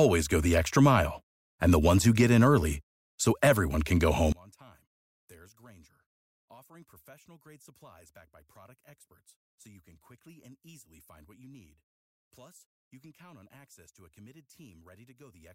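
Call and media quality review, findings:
One channel inverted, 4.32 s to end, after "so everyone can go". Mono sum drops about 31 dB. Speech turns faint. Likely cause: stereo path flipping one channel's polarity, cancelling the shared centre content.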